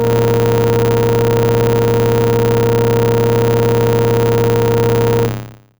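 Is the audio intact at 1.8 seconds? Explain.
No. The filter restarted on every block throughout, so each block starts from silence. This adds a 100 Hz buzz, visible as regular waveform ticks and spectrogram lines at 100 Hz multiples.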